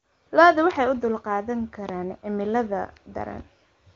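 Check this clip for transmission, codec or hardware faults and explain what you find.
No transmission, codec or hardware faults found: the speech passes through the AMR wideband (HD Voice) codec at what sounds like its top 23.85 kbit/s mode, with any codec damage faint at most and no content above about 7.3 kHz, as expected for that path.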